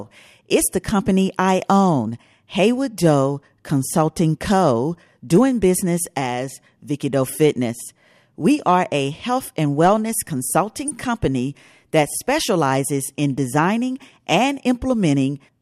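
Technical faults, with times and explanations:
10.88–10.91 s (just before "company that specializes in") and 14.34 s (just after "that specializes in designing"), DAB burbling: brief burbling blips. Bit errors of roughly 0.1–0.15 percent slip past error correction into a few MP2 frames, putting short blips of noise into single sub-bands.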